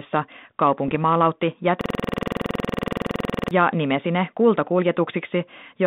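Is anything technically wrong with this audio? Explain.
Yes, there are two faults on this speech clip, which comes through a G.726 ADPCM telephone path limited to about 150 Hz to 3.7 kHz.

From 0.88 to 0.95 s there is a short cluster of pops and a rough, gritty burst, with the level briefly jumping and sagging. These are bit errors on an ADPCM link, at a rate of a little under 1%. Because ADPCM sends only differences from a running prediction, each flipped bit also knocks the decoder's step size and predictor off track. The damage therefore rings on for a few milliseconds instead of staying a single click.

From 1.81 to 3.51 s, just before "nimesi ne", the sound turns into a stuttering buzz. One 46 ms piece of audio repeats exactly, 37 times, at about 21.5 Hz. This is a system hang loop. The computer or driver stalled while the audio hardware kept replaying the same ring buffer, which fits a 2048-sample buffer. 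At this loop length it sits between a coarse buzz and a rapid machine-gun rattle.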